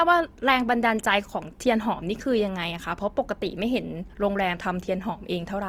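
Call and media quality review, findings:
Opus compression, whole clip, likely at a low bitrate around 24 kbps in CELT music mode. Encoder short of bits fills starved bands with folded lower content or noise instead of leaving gaps. Speech sounds rough and grainy, with plainly audible damage throughout. Bandwidth stays fullband, extending to about 20.2 kHz, so no muffling, but tonal parts turn noisy and harsh.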